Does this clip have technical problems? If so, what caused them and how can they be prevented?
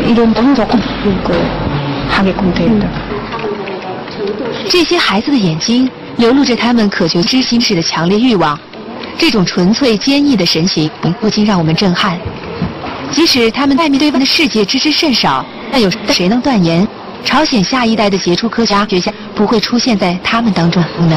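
Yes. Frames out of order: two neighbouring runs of frames, each about 0.19 s long (which fits runs of four frames), reached the decoder swapped and were decoded in that order. Each stretch therefore plays with its halves exchanged, a garbled flutter with no time lost, at 0.35–0.76, 7.23–7.64, 10.85–11.24, 13.77–14.18, 15.72–16.14, 18.70–19.11 and 20.79–21.17 s. Carrying sequence numbers and reordering frames in the receive buffer before decoding would prevent it.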